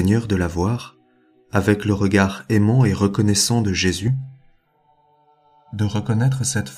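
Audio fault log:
4.08 to 6.77 s, channel delay (comb filtering): from here to the end the sound goes hollow and phasey. One channel lags by roughly a millisecond and a half, so folding to mono cancels shared content at evenly spaced notches, the first near 400 Hz.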